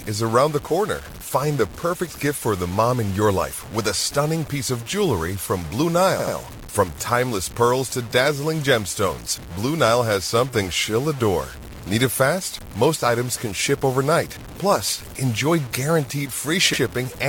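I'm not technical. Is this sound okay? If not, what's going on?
No. Low bit depth without dither runs throughout: the speech sounds gritty and grainy, most likely because it was stored with too few volume steps, so quiet parts roughen.

Repeated frames occur at 6.19 to 6.35 s and 16.73 to 16.81 s: a short 80 ms piece replays, twice then once, causing a brief stutter.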